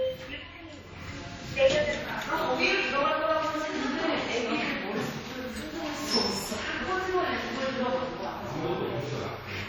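Throughout, the sound rings and smears, with hiss breathing alongside it, likely from heavy WMA compression at a rate fitting 32 kbps. Nothing remains above 19 kHz.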